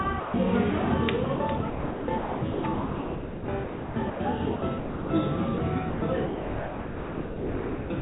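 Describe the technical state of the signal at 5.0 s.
At 5.0 s the sound is chopped, likely by the voice detector, across 4.56 to 5.10 s, with about 380 ms of real sound replaced by comfort noise. On a spectrogram, detail gives way to flat, featureless noise below 4 kHz; the waveform shrinks to steady low-level hiss.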